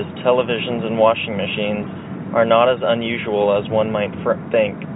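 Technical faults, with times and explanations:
The speech sits in a normal G.711 telephone channel, with content stopping at about 3.9 kHz as expected of 64 kbps A-law coding, and no technical faults can be heard.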